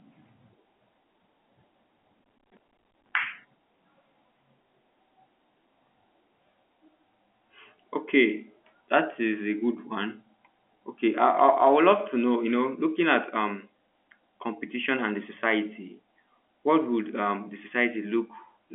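From 2.24 to 3.12 s there's a stretch of processor overload crackle. The machine couldn't keep up with its small audio buffers, which sound like roughly 10 ms each, and it missed a long run of deadlines back to back. Each miss drops in a short hole of silence with hard edges, so the narrowband telephone-style speech gets chopped into a gritty, tearing crackle that clears up once the load eases.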